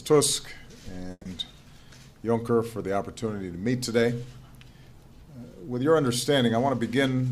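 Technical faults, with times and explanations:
1.11 to 1.26 s, burst of packet loss: A run of consecutive audio packets never arrived in time, so about 140 ms of the original sound is missing. The receiver covered the gap by stretching out the last sound it had received and fading it down, which gives the brief smeared, decaying tail heard here. The fade reaches about 30 ms of silence before the audio resumes later in the sound, with the missing portion skipped.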